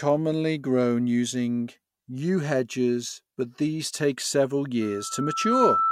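At 4.81 s, right after "but these take several", the microphone begins picking up the loudspeaker it feeds, and at 1.3 kHz the loop gain tips past one, producing loudspeaker feedback squeal. Each pass around the loop reinforces that frequency, so a single tone swells out of the speech in well under a second until it sits roughly 5 dB above it. The squeal is still sounding when the clip ends at about 5.91 s.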